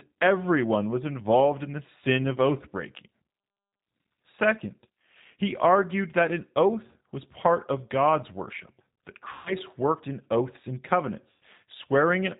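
Throughout the clip the speech carries the sound of the G.729 codec at 8 kbit/s, and the damage is plainly audible. Nothing above 4 kHz survives. Because each short frame is rebuilt from a vocal tract filter, a pitch predictor and a few pulses, the voice sounds rough and faintly synthetic, not merely muffled. That artificial grain distinguishes it from a simple narrowband or low-pass filter, which would dull the sound without making it synthetic.

VoIP packet loss concealed by the speech codec occurs twice, from 9.33 to 9.55 s and from 11.31 to 11.39 s. The first gap fits about 130 ms of lost packets and the second about 100 ms. The decoder extends the last pitch and filter while lowering the gain, so the speech smears into a buzzy tone or coloured noise that fades. It does not drop to silence or click as a plain dropout would, and it stays weak briefly after the audio returns.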